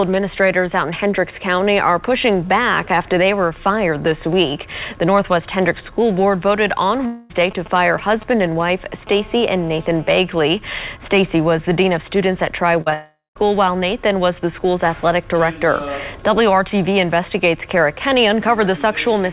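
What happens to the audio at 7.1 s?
From about 7.06 to 7.31 s the sound breaks into a fading buzzy hiss for roughly a quarter second, then resumes with that stretch simply gone. That points to a likely long network dropout, with the receiver stretching out the last sound to cover the gap.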